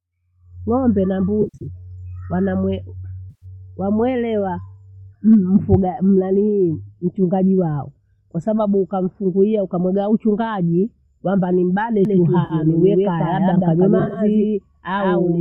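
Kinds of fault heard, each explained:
AAC frame loss with concealment: Compressed audio frames failed to arrive, so the decoder patched each gap from the last good spectrum instead of leaving silence. In this speech it shows as brief smeared, noisy, phasey patches: near 1.42 to 1.67 s, with about 170 ms of loss scattered over 220 ms in runs up to roughly 70 ms; at 3.30 to 3.45 s (120 ms); at 12.45 to 12.54 s (50 ms); and at 13.99 to 14.19 s, 100 ms spread in short bursts.
Doubled audio track: A second full-band copy of the speech is mixed in, most likely from a slower capture path duplicating the signal. After "ukamuga uchungaji kwamba nimbane", from about 12.05 s to the end, every sound is followed roughly 150 ms later by an equally loud, dry repeat with no room colour or decay. It starts abruptly and runs through to the close.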